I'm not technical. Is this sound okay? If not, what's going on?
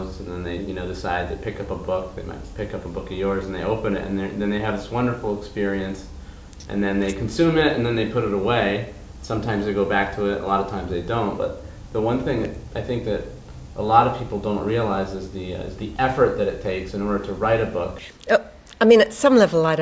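Yes, this sound is okay. There's nothing here that needs fixing.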